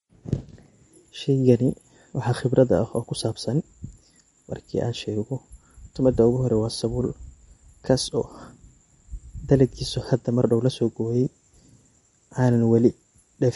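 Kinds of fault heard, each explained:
MP3 compression: the speech sounds watery and swirly throughout, likely from MP3 encoding at a low bitrate that fits about 48 kbps. On a spectrogram, energy stops at a flat ceiling at 11.2 kHz, with blotchy gaps where weak frequency lines flicker between frames.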